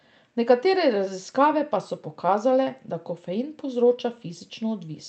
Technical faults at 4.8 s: none

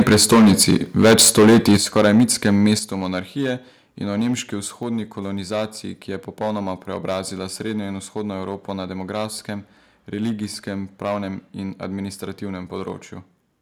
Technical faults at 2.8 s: hard clipping; microphone volume stepped down

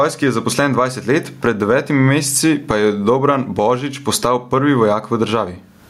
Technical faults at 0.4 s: gain pumping

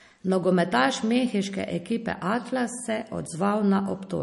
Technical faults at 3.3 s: MP3 compression

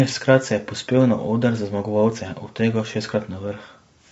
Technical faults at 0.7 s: low-delay AAC compression

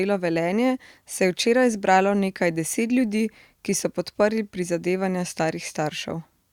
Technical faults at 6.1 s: none

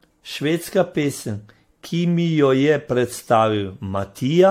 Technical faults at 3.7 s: generation loss

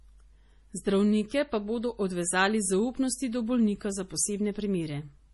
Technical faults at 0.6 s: MP3 compression

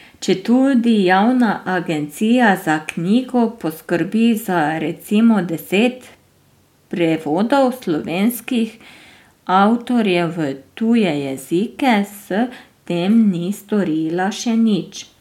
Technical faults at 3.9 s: none

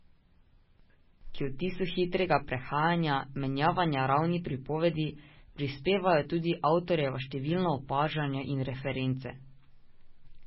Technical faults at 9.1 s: MP3 compression

